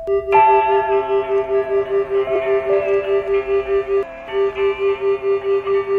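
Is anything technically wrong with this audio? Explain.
Yes. At 2.35 to 2.37 s the music lurches forward, losing about 50 ms of material. These are compressed frames skipped: whole coded frames were missing or rejected, so the audio jumps ahead by the length of the frames left out.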